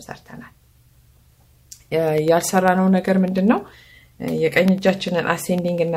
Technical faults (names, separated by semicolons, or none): periodic USB or driver dropouts